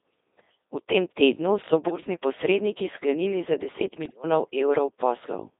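Codec 2 vocoder, throughout the clip: the speech has been reduced to pitch, voicing, energy and a coarse spectral envelope and then rebuilt from sine waves, so none of the original waveform survives. The damage is heavy. The voice is robotic and buzzy, and it sits in a narrow band from about 300 Hz to 3.7 kHz. The sound fits the 2.4 kbit/s mode.

Bit errors on digital voice radio, from 1.88 to 2.02 s, just before "posredniki sklenili za", and from 4.06 to 4.24 s: corrupted bits reached the vocoder, and each one skews the pitch, level, voicing or spectrum of a whole frame. The first burst points to an error rate of around 5 percent and the second to around 7 percent. In both, the synthetic voice lurches in pitch and loudness and breaks into warbling, bleepy gibberish.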